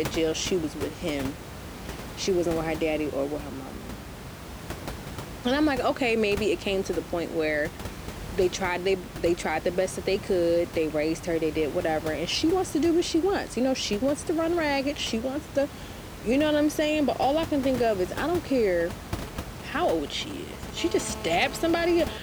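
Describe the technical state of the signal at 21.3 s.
A hard, raspy buzz sits over the speech at 21.3 s, steady and unrelated to it, pitched at about 217 Hz with a dense stack of harmonics and running at about 14 dB below the speech level from 20.77 s to 22.18 s. This is GSM phone buzz: a nearby 2G phone on a call transmits in bursts 217 times a second, and the audio circuitry rectifies those radio pulses into audible sound. The room noise sits about 12 dB below the speech.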